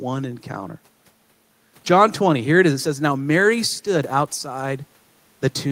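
It's a speech recording with nothing technically wrong to point to, just a faint bed of background noise from the room sitting about 40 dB under the speech.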